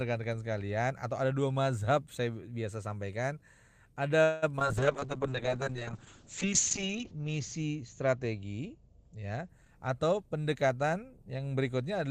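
From 4.23 to 4.71 s the speech breaks up with repeated packet loss, giving a robotic sound. Four gaps arrive in quick succession, the longest 189 ms. Some 218 ms is patched by stretching the previous sound, and 60 ms simply drops out. Unlike a single dropout, the choppiness recurs across nearly half the span.

At 4.78 s a call bitrate drop sets in and lasts until 9.55 s. The sound fits an encoder forced from about 32 kbps down to about 6 kbps, bottoming out for 1.8 s. The top end narrows from 20 kHz to 8 kHz, so the speech turns muffled and watery. Unlike the choppy stretch before it, nothing goes missing.

Overlapping that, from 5.00 to 5.50 s, a jitter buffer slow-down draws the speech out by 38 ms to 94% speed. The receiver repeats single pitch periods and bits of pauses, so syllables lengthen while pitch stays put. A tape-style slowdown would drop the pitch, and this one does not.

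From 9.62 to 11.32 s a jitter buffer speed-up runs the speech at 111% speed. The receiver trims roughly a fifth of a second of pitch periods to shed excess delay, so delivery sounds hurried but stays at normal pitch. This sets it apart from simply playing back fast.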